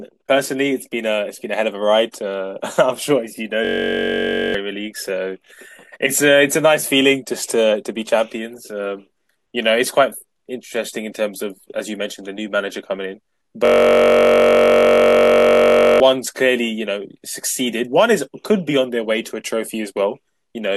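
Speech breaks into a steady buzz at about 47 Hz from 3.65 to 4.54 s and again from 13.65 to 16.0 s, a system hang loop: a frozen system left the hardware replaying one 21.33 ms slice, which fits a 1024-sample buffer. Roughly one and two seconds of speech are lost.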